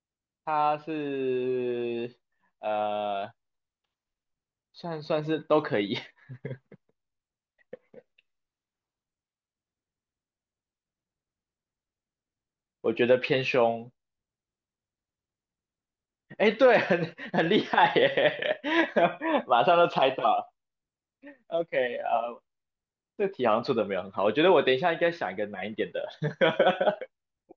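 Speech recording; no technical faults audible anywhere in it.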